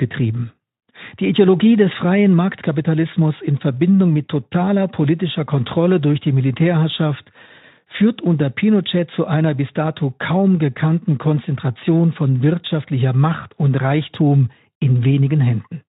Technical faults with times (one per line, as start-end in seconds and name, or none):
none